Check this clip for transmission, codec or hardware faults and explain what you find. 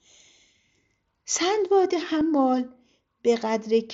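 One transmission fault is audible in this speech, carried over the Bluetooth mSBC headset codec. At 2.2 s there is a brief concealed Bluetooth headset packet loss of about 7.5 ms, which fits a single lost packet. The receiver patched the gap by repeating a best-matching slice of the preceding waveform, so it is almost hidden. What sets it apart from a plain dropout is that there is no silent hole or click, only a short stretch of continued waveform.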